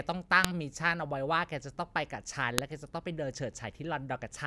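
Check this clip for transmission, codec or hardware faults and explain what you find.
Two sharp clicks point to one fault: a file header played as audio, at 0.45 s and again at 2.58 s. The speech appears to have been assembled from separate WAV pieces joined without stripping each piece's header, so a few dozen bytes of header data are read as sample values. Those bytes bear no relation to the surrounding waveform, so each join produces a brief, loud snap that cuts across the speech regardless of what is being said at that moment.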